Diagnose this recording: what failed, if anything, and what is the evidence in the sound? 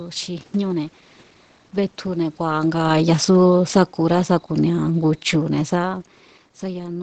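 The fault sits in the call processing stage: automatic gain falling. From 2.4 s to 6.01 s the level sinks steadily by about 6 dB, and the room noise drops with the speech, which separates it from the talker shifting position around 2.5 s and again near 5.5 s. The gain control judged the input too hot or its background noise too strong and wound its gain down gradually, so the whole signal, background included, fades together rather than the speech alone.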